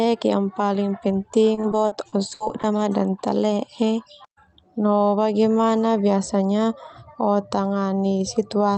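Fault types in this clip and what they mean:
Repeated packet loss (robotic sound): from 1.08 to 2.79 s, a dozen or so short dropouts, the longest about 60 ms, are patched by extending the previous sound, making the speech choppy and robotic; the spectrogram shows smeared, repeated frames and the waveform shows looped segments.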